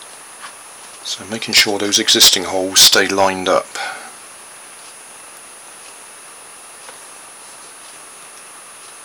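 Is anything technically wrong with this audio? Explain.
Yes. There is hard clipping in two bursts, from 1.55 to 2.36 s and from 2.77 to 3.58 s. In both, the level runs about 15 dB past what the signal path can carry. The peaks get sliced off flat. Those squared tops create strong harmonics high in the spectrum. With overload that heavy, the sound doesn't just crackle on peaks. It turns into a harsh, buzzing fuzz across each of those stretches.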